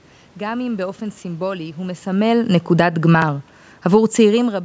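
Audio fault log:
2.06 to 3.09 s, automatic gain falling: the AGC judged the input too hot or its background noise too strong and eased its gain down by about 4 dB over that second, so the voice and the room noise behind it sink together, unlike the talker shifting position around 2 s.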